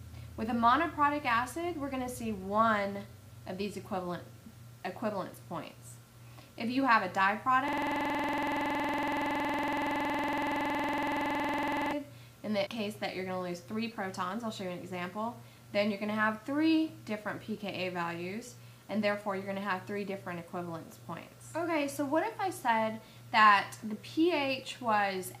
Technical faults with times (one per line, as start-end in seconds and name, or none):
7.68-11.92 system hang loop